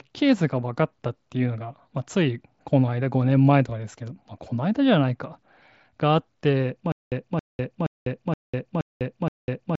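Stutter with silent gaps from 6.92 s to the end of this speech clip: a 272 ms burst repeats six times, each followed by about 200 ms of digital silence, every 0.47 s. The likely cause is a stalled player replaying its last buffered fragment at each retry, so the audio that belonged there is lost. The speech also carries the 8 kHz band limit and light grain of a Bluetooth mSBC headset link.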